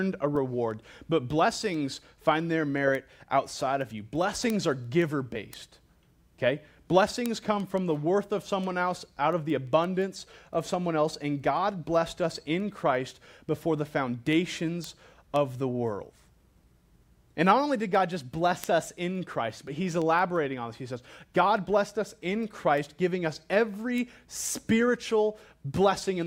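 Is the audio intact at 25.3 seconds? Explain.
No. Word clock ticks run from 0.19 s to 26.22 s: an unlocked receiver clock, off by around 100 ppm, slips one sample, producing sharp ticks about every 0.15 s.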